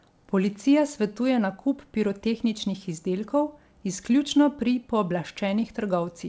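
No technical faults occur at any point, so there is nothing to describe in time order.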